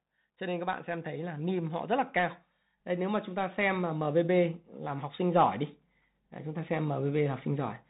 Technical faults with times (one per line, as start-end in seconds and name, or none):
0.00-7.89 Bluetooth CVSD headset codec
0.38-5.60 automatic gain rising